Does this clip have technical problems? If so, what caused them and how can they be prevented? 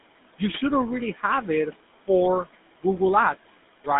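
Yes. A noise suppressor runs for the whole clip, estimating the steady background and pulling down each band it judges to be noise, by about 17 dB at its deepest. The room noise, about 18 dB below the speech, therefore dips in the gaps and swells back under each phrase. Gentler suppression settings, or a quieter room so less needs removing, would prevent this.

The GSM full-rate codec is also active throughout, rebuilding the voice from a vocal-tract model driven by sparse, regularly spaced pulses, which fits a 13 kbps GSM full-rate link. The result is a plainly audible buzzy, gravelly roughness, with the sound confined to roughly 200 Hz to 3.6 kHz and nothing above 3.8 kHz, so it sounds narrow and telephone-like. Carrying the call over a wideband codec such as AMR-WB or Opus would avoid this.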